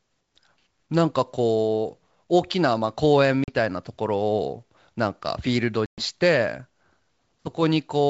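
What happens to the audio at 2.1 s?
Nothing goes wrong at 2.1 s: the speech carries on intact through G.722 wideband telephone coding at 64 kbit/s, which leaves at most a faint hiss in the band above 4 kHz.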